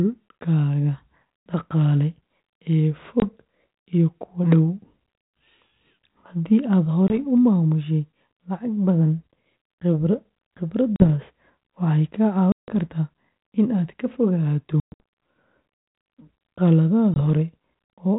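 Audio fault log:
3.2–3.24 s, 7.08–7.19 s (before "u maamushay lacag badan"), 10.96–11.04 s, 12.52–12.83 s, 14.8–15.01 s (after "in aad ka fogaato"), 17.14–17.21 s: packet loss on an ADPCM call. The speech drops into sharp-edged silences of about 20, 20, 40, 160, 180 (broken up, longest 120 ms) and 20 ms, then returns with brief slight distortion. The silences are lost packets. The G.726 ADPCM coding runs at 32 kbit/s with only light damage: each silence throws the decoder's predictor and step size away from the sender's, so the sound is off until they resync over some tens of milliseconds.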